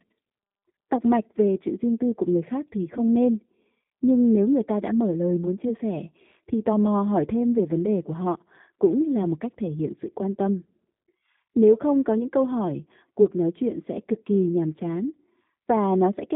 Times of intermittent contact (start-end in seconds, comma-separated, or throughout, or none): none